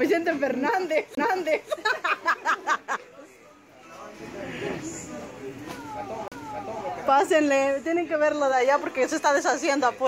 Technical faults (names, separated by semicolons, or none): CD skip